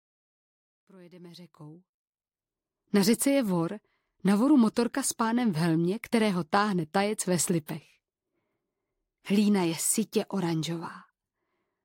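No technical faults can be heard in this recording, and the level rises in a smooth, editor-style fade from the opening to about 2.39 s.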